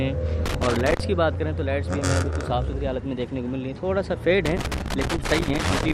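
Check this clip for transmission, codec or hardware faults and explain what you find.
There is a hardware fault: loose connector crackle, heard twice. The first burst runs from 0.46 to 1.00 s. The second starts at 4.46 s and continues to the end of the clip at 5.94 s. A worn or dirty contact is shifting in its socket. Each time it loses and regains contact, the signal is cut and restored. Any DC on the line adds pops. The result is an irregular, scratchy crackle laid over the sound.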